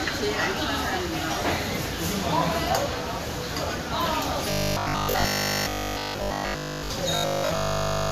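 From 4.50 to 6.90 s, and again from 7.16 s to the end, the sound collapses into a rigid, metallic 50 Hz buzz: robotic sound from repeated short buffers, likely a 20 ms buffer repeated because fresh audio arrived too seldom, replacing essentially all of the real material.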